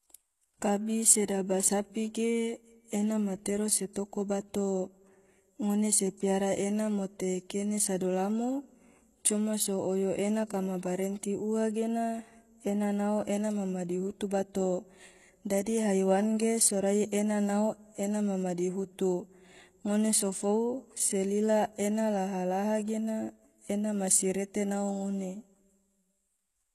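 HE-AAC compression is audible throughout the speech, with nothing above 12.4 kHz. The sibilants have a gritty, metallic and lispy edge, and the top end sounds synthetic. The likely cause is spectral band replication: only the lower band is coded properly, and the treble is rebuilt by copying lower bands upward under a coarse envelope, so its harmonics fail to align. The plainly audible damage fits a bitrate around 16 kbps.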